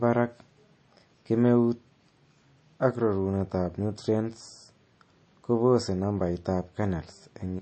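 The speech sounds watery and swirly throughout, with the top end cut off cleanly around 8.3 kHz, likely MP3 compression at a low bitrate near 32 kbps.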